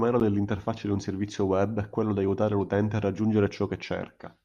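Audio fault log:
Listening to the speech, nothing stood out as a fault at any point.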